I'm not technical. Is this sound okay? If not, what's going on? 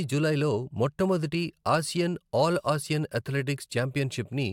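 Yes, it sounds fine; nothing is wrong here.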